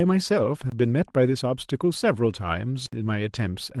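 A speech recording broken twice by a block of digital silence: a 23 ms dropout at 0.70–0.72 s, which fits a missed 1024-sample buffer, and a longer 64 ms hole at 2.86–2.93 s. The signal cuts abruptly to silence and back with no fade, so each gap is heard as a short hole. The waveform shows flat lines, and the spectrogram shows blank vertical bands.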